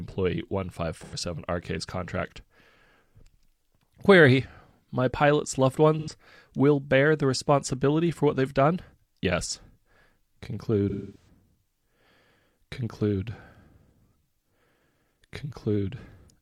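Speech with AAC frame loss with concealment at 1.03–1.15 s, 5.99–6.11 s (between "pilot's loved" and "will bear the responsibility") and 10.90–11.28 s. Unlike a hard dropout, the two short gaps, which fit about two lost frames, sound smeared and phasey rather than silent. The longest, fitting six, decays away and then fades back in.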